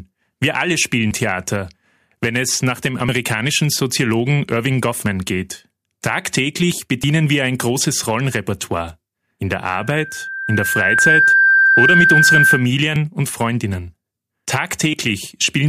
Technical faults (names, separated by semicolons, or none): loudspeaker feedback squeal; audio missing between chunks